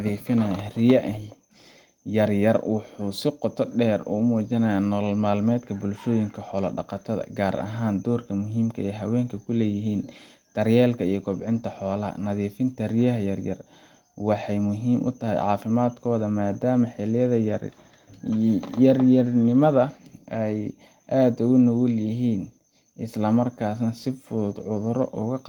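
Nothing stood out on listening to this speech recording; no technical fault could be picked out at any point.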